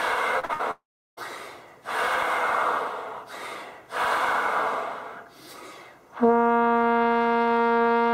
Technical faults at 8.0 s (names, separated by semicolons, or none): none